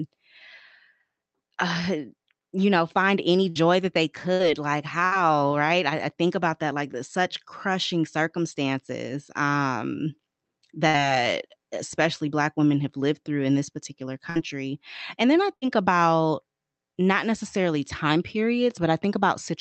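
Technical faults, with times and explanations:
3.49–3.58, 4.33–4.42, 5.05–5.14, 10.87–10.97, 14.30–14.38 and 15.55–15.65 s, burst of packet loss: each time, right after "you know find any" for the first, about 60 ms of speech goes missing. The receiver stretches the last sound to fill the hole, so you hear a brief held buzz or fading hiss before the speech jumps ahead.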